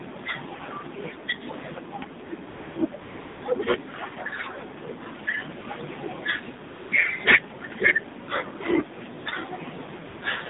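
Throughout, the speech passes through the AMR narrowband mobile codec at a low bit rate, which fits AMR-NB at about 7.4 kbps, with the line band limited to 150 Hz to 3.7 kHz. Each 20 ms frame is rebuilt from a vocal-tract model and a few excitation pulses, so the voice sounds thin, muffled above the cut-off, and plainly buzzy and synthetic.

Next, AMR comfort noise appears at 2.50 to 2.76 s, 3.02 to 3.42 s, 5.24 to 5.26 s, 5.60 to 5.64 s, 6.68 to 6.92 s, 9.20 to 9.26 s and 10.06 to 10.22 s. The phone stopped sending speech frames for between 20 and 400 ms, and the receiver filled each gap with a smooth, steady generated noise that switches abruptly in and out.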